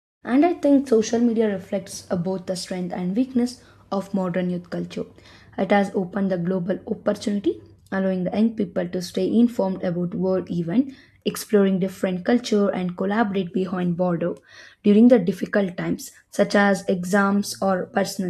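Nothing here counts as a fault: the speech comes in on a gentle fade over the first 0.27 s or so and carries on from there without anything going wrong that a listener would pick up on.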